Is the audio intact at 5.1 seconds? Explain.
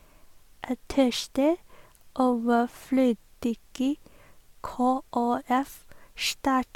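Yes, the audio is intact at 5.1 seconds, with no audible fault at that point.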